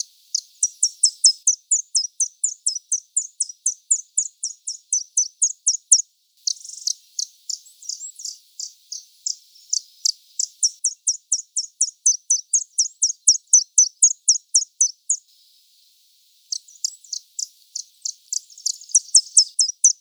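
From start to finish the clip suffers from a wrong sample rate: the samples are clocked out faster than they were captured, with no rate conversion in between. The speed-up is 1.5 times, which fits material recorded at 32 kHz being played at 48 kHz. Because speed and pitch move together, everything runs half again as fast and sits about 7 semitones higher, giving a hurried, brightened, chipmunk-like quality throughout.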